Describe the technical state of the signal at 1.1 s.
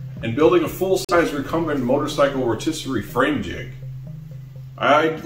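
At 1.1 s the signal sits inside a digital broadcast dropout from 1.05 to 1.14 s. The receiver muted on a corrupted frame, so about 43 ms of sound vanishes into a brief silent hole, which fits a single lost frame.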